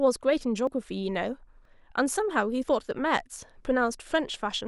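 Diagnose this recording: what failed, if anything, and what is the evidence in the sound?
Brief skips break the speech at 0.67, 1.65 and 2.63 s, about a second apart, each dropping a tiny sliver of sound with the two sides butted together. This is likely audio missing between chunks, lost at the driver or buffer stage during each one-second handover.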